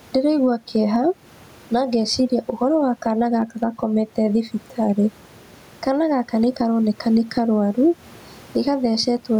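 Gain pumping runs through the clip, with the gain swinging around 10 dB; the room noise sits about 36 dB below the speech. The likely cause is excessive gain with a fast limiter clamping it, flattening the dynamics.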